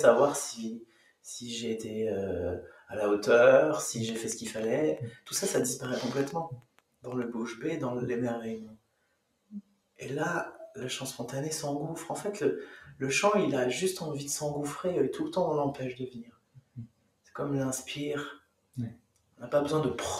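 Right through the clip a noise suppressor meant for speech is working on this sound. It treats sustained parts and tails as noise and pulls them down, so the level swings by around 15 dB and the sound pumps and thins out.

You can hear the sound cut by the noise suppressor at 0.79–1.27 s, 2.69–2.91 s, 5.11–5.30 s, 6.56–7.06 s, 8.65–10.01 s, 16.17–17.35 s, 18.38–18.77 s and 18.95–19.42 s. The held portions sink by about 11 to 18 dB, and the longest dip runs over a second.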